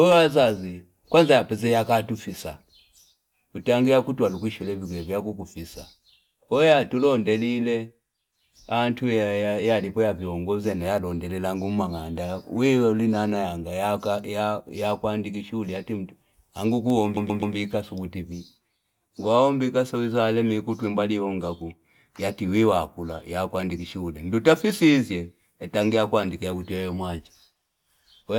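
Repeated frames occur from 17.17 to 17.55 s in the speech. A 128 ms stretch of compressed audio, consistent with a run of four short frames, reached the decoder more than once and was played three extra times. The result is a rapid stutter, the same fragment heard four times in a row. The repeats add 384 ms to the audio's length.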